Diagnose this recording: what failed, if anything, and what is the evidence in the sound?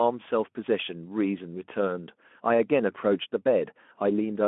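Nothing failed here: the speech comes through a narrowband phone-style chain with nothing above about 3.7 kHz, and none of the stages has broken down.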